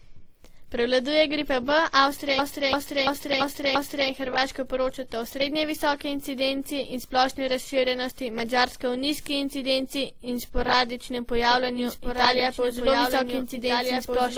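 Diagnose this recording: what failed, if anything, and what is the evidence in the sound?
Codec stage: mixed smeared, swirly artefacts throughout, with nothing above 20.2 kHz, likely from transcoding between lossy codecs, pointing to a WMA-then-Opus chain. A spectrogram shows blurred, patchy high bands.

Driver or buffer stage: a system hang loop from 2.39 to 4.10 s repeats one 341 ms block five times at 2.93 Hz, fitting a 16384-sample buffer. The waveform shows identical repeated segments.

Playback or edit stage: a doubled audio track starts abruptly at 11.51 s and runs to the end, a dry copy about 5 dB quieter, roughly one and a half seconds behind. It is likely a second out-of-step copy. The waveform shows overlapping, offset duplicates.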